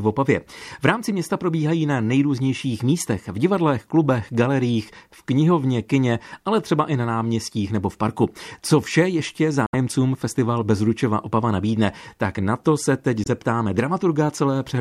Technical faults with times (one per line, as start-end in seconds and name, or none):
9.66-9.75 Bluetooth dropout
13.24-13.28 Bluetooth dropout